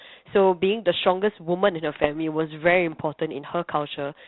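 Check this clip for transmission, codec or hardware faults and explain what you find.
Two short bursts of bit errors on an ADPCM link disturb the speech, carried over what sounds like a 32 kbit/s G.726 path with nothing above 4 kHz. From 1.93 to 2.06 s, and again from 3.95 to 4.00 s, flipped bits corrupt the decoder's step size and predictor, so each hit rings on as rough pops and brief level jumps rather than a clean dropout or a smoothed gap, as packet loss would give.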